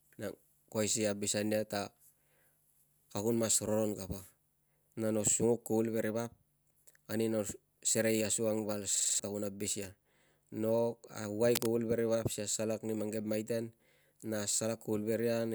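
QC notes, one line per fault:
8.96–9.20 s, system hang loop: after "asukang val" the system froze while playback kept cycling one 46 ms buffer (which fits a 2048-sample size) five times, giving a 21.5 Hz stutter and losing roughly 0.2 s of speech.
11.54–11.72 s, cable scratch noise: a worn cable or connector was likely disturbed, its contact resistance fluctuating, so dense uneven scratching lands just below speech level right before "veri vap".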